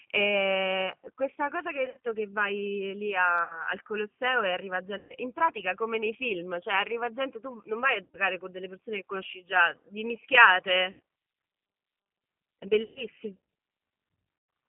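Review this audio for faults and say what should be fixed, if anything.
The whole call runs through the G.729 codec, and the damage is plainly audible. The line is squeezed to roughly 150 Hz to 3.4 kHz, so there's no air or sparkle up top and a thin bottom end. On top of that the speech has that rough, slightly synthetic edge you get when a voice is rebuilt from a vocal tract filter, a pitch predictor and a handful of pulses per frame, which fits G.729A at 8 kbit/s. Prevention: if the network allows it, negotiate a wideband codec such as G.722 or Opus instead of G.729.

There's also VoIP packet loss concealed by the speech codec, seven times: 1.86–1.98 s, 3.44–3.66 s, 4.98–5.15 s, 8.03–8.17 s, 10.91–11.00 s, 12.83–13.04 s and 14.38–14.49 s. Each gap loses roughly 60 to 130 ms of audio. The first one is broken up, with about 90 ms missing in pieces over 160 ms, and the longest piece is 40 ms. 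When packets go missing, the decoder carries on from its last pitch and filter state and turns the gain down frame by frame. So instead of silence you hear the sound stretched into a buzzy tone or coloured noise that fades. Because each frame leans on the one before, it takes a moment to sound right again after the packets come back. Prevention: track down the loss on the network path, and add jitter-buffer headroom or FEC so the decoder doesn't have to guess.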